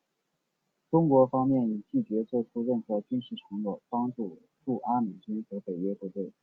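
Listening closely to the speech, nothing stood out as a technical fault at any point.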